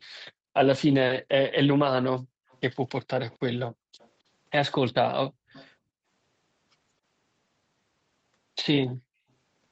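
From 2.26 to 2.5 s the background is gated by the echo canceller. While the far end's loudspeaker is active, the canceller pulls the microphone down hard, by about 39 dB at its deepest, for roughly a fifth of a second. The room tone vanishes and then returns abruptly. On a waveform the noise floor flattens to a near-empty stretch. On a spectrogram a vertical band goes dark across the whole range, which stops at 8 kHz because of the call's bandwidth.

Right after the gate releases, at 2.5 to 2.58 s, there is a brief echo leak, a faint delayed copy of the speech about 265 ms behind the original and about 35 dB below it. It is most likely residual loudspeaker sound that the canceller failed to subtract and sent back. It sounds like a quiet, delayed repeat of the voice. On a spectrogram it shows as weak harmonic traces repeating the earlier speech pattern, offset in time.

The same leak returns at 3.3 to 3.38 s, a little stronger at about 30 dB below the speech. 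A second gate follows from 3.71 to 3.98 s, dropping about 40 dB for roughly a third of a second. Another leak at 3.99 to 4.09 s, again about 35 dB down and 265 ms late, comes straight after the gate lets go.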